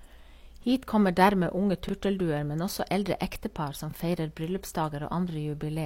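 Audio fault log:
1.89–1.91 s, overlapping chunks: a brief stutter, like a tiny skip-back with a click. A new block of audio began about 23 ms before the previous one finished, so that sliver plays twice at the join, which fits processing in 2.0 s chunks.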